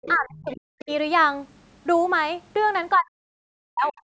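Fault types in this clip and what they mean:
other side's voice leaking through: A faint second voice sits under the talker at 0.03 to 0.16 s, 0.36 to 0.6 s and 3.97 to 4.01 s, about 15 to 35 dB down, likely residual loudspeaker echo the canceller missed. On a spectrogram it appears as weak, separate harmonic traces.
speech suppressed in double talk: From 0.14 to 0.9 s and from 2.96 to 3.94 s the speech sinks by up to about 40 dB, likely because the echo canceller turned everything down while both sides talked. The waveform envelope caves in, and the spectrogram shows dark holes.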